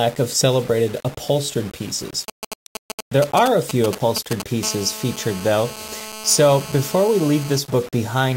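From start to finish the speech carries a coarse, grainy distortion that rides on the signal itself, rising and falling with each syllable rather than sitting underneath as steady hiss. Quiet passages turn gritty, and the softest tails sputter or drop out instead of fading smoothly. The cause is likely low bit depth without dither: the samples were rounded to only a handful of levels, which fits roughly 6-bit quantisation, leaving error around 20 dB below the speech.

From 2.28 s to 4.42 s GSM signalling bursts break in: a galloping dit-dit-dit of short raspy buzzes, fairly loud, about 5 dB under the speech. A nearby 2G phone is exchanging brief groups of radio bursts with the network before a call or message, and the audio circuitry rectifies those pulses into sound. Within each group the buzz repeats at 216.7 Hz, the GSM frame rate, with no relation to the speech.

From 4.63 s to 7.59 s the pattern settles into continuous GSM phone buzz, a hard, harmonic-rich rasp at 216.7 Hz about 15 dB below the speech. 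The phone is now in a call and transmitting bursts steadily 217 times a second, so the rectified interference becomes an unbroken drone rather than intermittent clusters. Its pitch stays fixed while the speech moves over it, which marks it as external pickup, not part of the recording.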